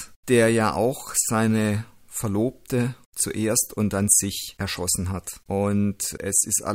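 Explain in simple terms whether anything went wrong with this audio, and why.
Nothing went wrong with this recording, and no technical fault can be heard anywhere in it. The speech comes through as it should, with no dropouts, glitches or distortion to point to.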